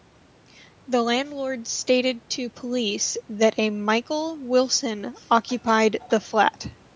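No technical faults can be heard anywhere in the speech. The call microphone processing is audible only as a normal band limit, with nothing above 8 kHz and the lowest bass trimmed away.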